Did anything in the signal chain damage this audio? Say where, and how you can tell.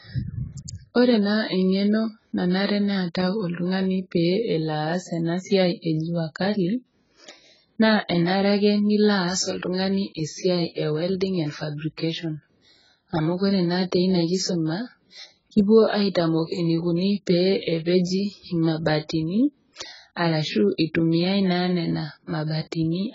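Yes, at the codec stage, throughout the speech: nothing reaches above 7.6 kHz, and sibilants smear into a fizzy, warbling texture. This is likely heavy AAC compression at a very low bitrate around 12 kbps. A plain low-pass filter would dull the top cleanly, without that unstable texture.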